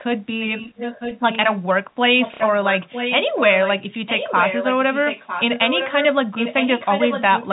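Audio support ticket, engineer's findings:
Echo leak, 0.4 to 1.55 s: a delayed copy of the talker, roughly 10 dB down, trailing about 0.95 s behind. Far end likely on a loudspeaker with its echo canceller letting residue through and sending it back to us.

Echo leak again, 2.19 to 6.06 s and 6.35 to 7.53 s: same 0.95 s lag, now louder, about 5 dB under the talker. Likely same mechanism, more residue escaping the canceller.

Packet loss with last packet repeated, 2.34 to 2.4 s: a short robotic stutter, 60 ms of audio missing, which fits two 30 ms packets. The receiver replays the last good packet until fresh ones arrive, so the repeats buzz at roughly 33 Hz. It lands inside the louder echo stretch, under the narrow G.711 telephone band.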